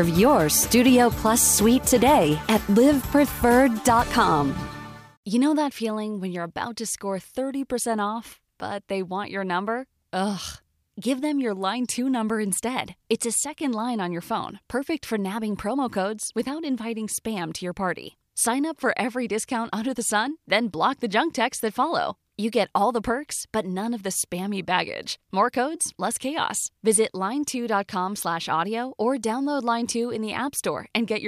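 No technical faults can be heard anywhere in this recording.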